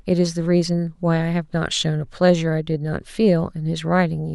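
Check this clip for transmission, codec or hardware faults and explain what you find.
No transmission, codec or hardware faults can be heard in this speech recording, and the signal comes across as technically intact.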